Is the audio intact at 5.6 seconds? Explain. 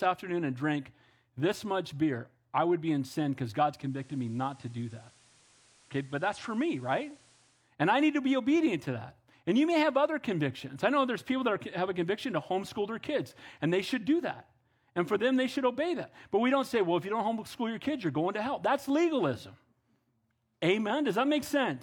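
No. From 3.67 to 7.75 s, digital radio blending to analogue FM: a 420 ms cross-fade brings hiss and about 2 dB lower level, not a silent dropout.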